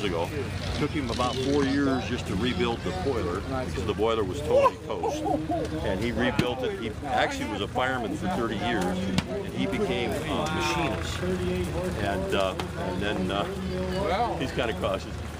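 No dropouts, distortion, glitches or other transmission or processing faults are audible anywhere in the recording.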